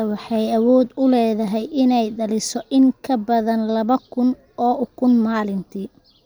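No technical faults are audible.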